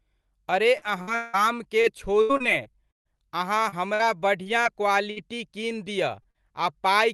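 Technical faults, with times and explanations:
0.77 to 3.07 s, repeated packet loss (robotic sound). Eight gaps break this stretch, about 560 ms missing in all. The longest gap is 181 ms. The receiver patches each hole by stretching the last sound, so about a quarter of the span is synthetic. That produces a choppy, robotic texture.
3.69 to 5.18 s, repeated packet loss (robotic sound). Five more gaps follow, about 200 ms missing, none longer than 52 ms. Only about an eighth of the span is patched. The choppiness is lighter and briefer here.
6.22 to 6.26 s and 6.30 to 6.36 s, short concealed packet loss. Two small holes of 20 ms and 40 ms never arrived in time. The decoder continues the last sound, from its pitch if voiced or as shaped noise if not. It then blends back into real audio. Each one sounds like a brief smear or wobble, and they sit close together. A short consonant can drop out inside them.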